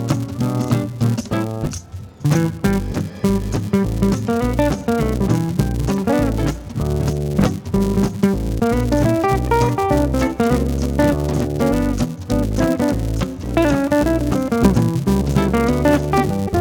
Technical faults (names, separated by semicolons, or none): filter restarted on every block; compressed frames skipped